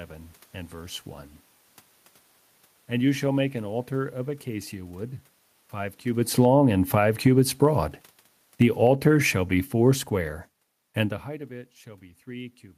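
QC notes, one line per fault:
6.05–11.25 s, automatic gain falling: after "of acacia wood five" the level sinks steadily by about 11 dB until "of it". The room noise drops along with the speech because the gain control judged the input too loud, or its background noise too strong, and gradually lowered its gain.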